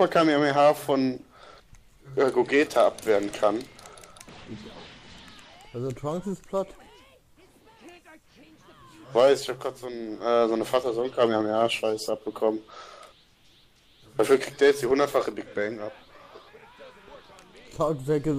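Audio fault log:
No technical faults are audible; the signal level, continuity and frequency balance stay steady across the clip.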